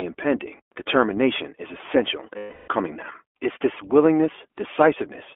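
A speech clip carried through the iLBC codec, band-limited to 300 Hz to 3.4 kHz. It sounds plainly rough and synthetic, with coding that fits 20 ms frames. On a spectrogram, all energy sits inside that band, with empty space above 3.4 kHz and a thin floor below 300 Hz. From 2.38 to 2.68 s, right after "impending determination is essential", come lost iLBC frames. The decoder conceals the 0.30 s gap by repeating the last pitch cycle mixed with noise, heard as a held buzzy or breathy vowel. The waveform there shows one cycle repeating, and the spectrogram shows repeated harmonic stripes fading before normal speech resumes almost at once.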